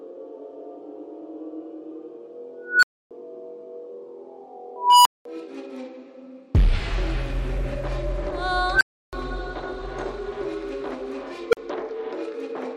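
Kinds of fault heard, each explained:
Unstable filter: a recursive filter in the chain went unstable, so its output fed back and grew until it overflowed. Four times a tone near 1.5 kHz, 1 kHz or 500 Hz swells over 46 to 292 ms into a loud squeal, then drops to 40 to 320 ms of silence.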